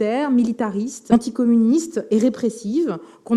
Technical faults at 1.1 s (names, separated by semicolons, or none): skip ahead